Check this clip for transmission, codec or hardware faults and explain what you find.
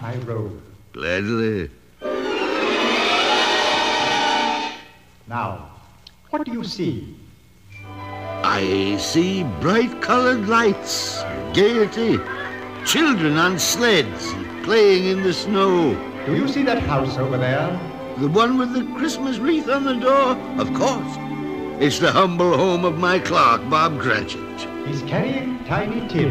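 One fault stands out: a train of clicks from 10.66 to 14.66 s. Around fifty sharp, similar ticks arrive at an uneven pace, averaging 11 per second, about as loud as the sound itself. Likely cause: nearby equipment interference or a struggling interface injecting repeated pulses.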